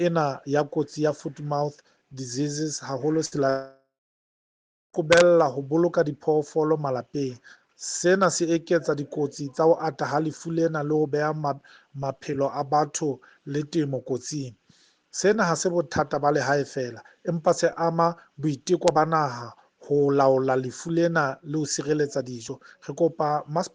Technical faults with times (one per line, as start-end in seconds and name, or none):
3.25-3.35 burst of packet loss
3.50-4.96 long network dropout